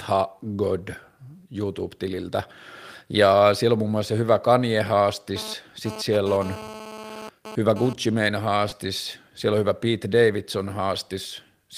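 From 5.36 s to 7.93 s a GSM phone buzz sits under the speech, a hard, raspy tone at about 217 Hz with a dense stack of harmonics, roughly 14 dB below the signal. A nearby 2G handset transmitting in bursts at that rate is being rectified by the audio circuitry. Here the buzz comes and goes rather than holding steady, which fits a phone moving data rather than carrying a call.

At 8.69 s there is a short concealed packet loss, heard as a brief smear in the speech lasting about 40 ms. Around 20 ms of audio failed to reach the decoder in time, and the receiver filled the gap by extending the preceding sound before blending back into the real signal. The join is audible as a momentary blur rather than a clean dropout.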